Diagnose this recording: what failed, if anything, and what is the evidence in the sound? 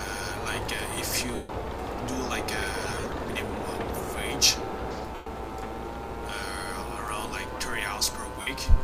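The Bluetooth link dropped LE Audio frames at 1.35–1.49 s, 2.87–3.17 s (scattered short gaps), 5.15–5.26 s and 8.41–8.47 s. The LC3 decoder's concealment repeats the last spectrum with scrambled phase, so each gap comes out as a noisy smear, and the longer unbroken losses fade toward silence.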